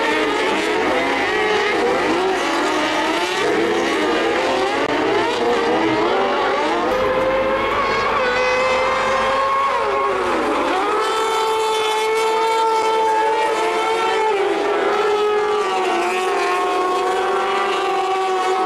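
At about 4.87 s there's a block of digital silence lasting 20 ms, running to about 4.89 s. The sound just drops straight to silence and snaps back without any fade. At this length it comes across as a tiny hole. A gap this clean usually means the output buffer wasn't filled in time and zeros went out instead.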